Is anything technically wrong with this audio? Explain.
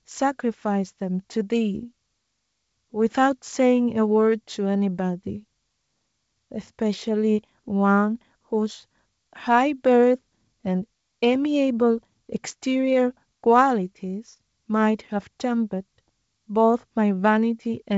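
No, nothing is technically wrong with this speech clip. It comes through G.722 wideband telephone coding at 64 kbit/s, so the sound stops at about 7.7 kHz, with at most a faint trace of the coding.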